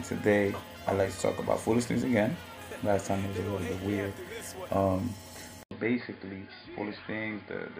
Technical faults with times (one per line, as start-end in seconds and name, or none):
5.63-7.79 input switched to a poorer device